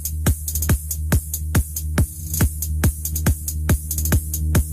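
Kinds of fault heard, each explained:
Hard clipping: The signal is pushed past what a stage in the chain can pass, by about 9 dB. Every peak above that ceiling is sliced flat instead of following its true shape. Only a small share of the waveform, around one sample in twenty, sits on the ceiling. Those flat tops create harmonics high in the spectrum. Throughout the clip, the loudest moments pick up a harsh, gritty edge and a crackle on each peak.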